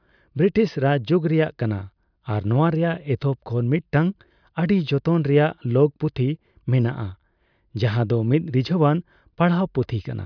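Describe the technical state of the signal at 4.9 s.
At 4.9 s the speech signal is intact, with no dropout, clipping, glitch or other fault audible at that moment.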